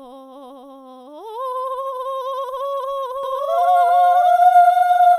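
From 3.23 s to the end, the music gains a second, equally loud copy trailing around 0.7 s behind, entering abruptly with no decay or room colour. This doubled audio track likely comes from a slower capture path or an edit stacking two out-of-step copies.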